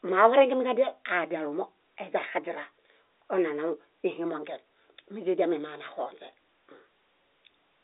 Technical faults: none

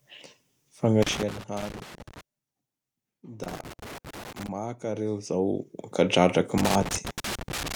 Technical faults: loose connector crackle

